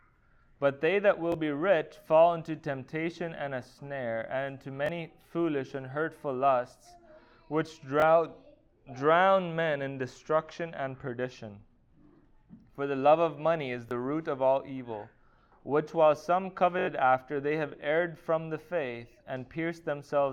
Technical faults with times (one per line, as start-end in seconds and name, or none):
1.32-1.34 repeated buffer
4.86-4.89 repeated buffer
8.00-8.02 repeated buffer
13.89-13.91 repeated buffer
16.79-16.87 repeated buffer